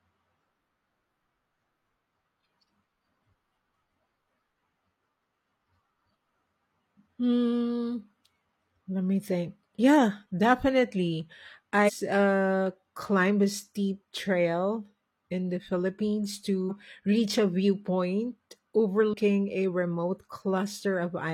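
Around 11.84 to 11.91 s, then 16.66 to 16.71 s and 19.09 to 19.14 s, the speech has brief glitches from damaged data in the compressed stream. Corrupted frames get misdecoded, and the decoder loses sync until it finds the next frame header.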